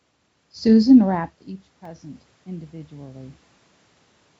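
From 0.89 s to 3.46 s there is automatic gain rising. The input level fell by about 18 dB, in step with the talker moving away from the microphone around 1.0 s, and the gain control responded by slowly pushing its gain up by about 7 dB over roughly two and a half seconds. The speech and the room noise swell together, so the background climbs along with the voice, and the gain recovers only part of the lost level.

At 1.85 s a repeated buffer occurs. Fresh audio failed to arrive in time, so the output played the previous block once more. The block lasts 1.33 ms, which fits a 64-sample buffer. With so short a piece, the repeat is heard as a click or brief buzz rather than a stutter, because the hard joins at each end of the duplicate break the waveform. The gap it covers is on the order of a millisecond and a half. It sits in the middle of the gain ramp, on top of the speech, which has no content above 8 kHz.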